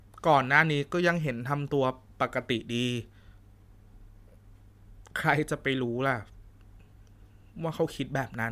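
No technical faults are audible anywhere in the speech recording.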